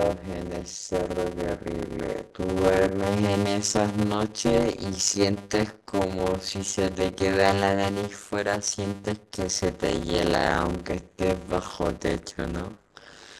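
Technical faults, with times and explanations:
Throughout, block size mismatch (padded). Each block of speech is shorter than the block the next stage reads, so the remainder is filled with silence. This fits about 256 samples written per block. The silent gaps repeat 100 times a second, which produces a steady buzz at 100 Hz over the speech. Because every block is stretched with padding, the speech runs at 0.533 of normal speed. Its timbre stays.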